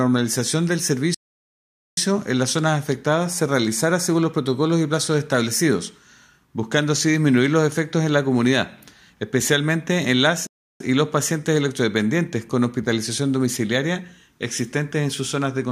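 At 1.14 s the sound cuts out abruptly for about 0.83 s before resuming at 1.97 s, and at 10.47 s it drops out again for about 0.33 s, returning at 10.80 s. Both are playback stalls, likely the player running short of data or its thread being blocked, so output went silent until it caught up. On a waveform each appears as a flat silent gap; on a spectrogram, a clean blank vertical band across all frequencies.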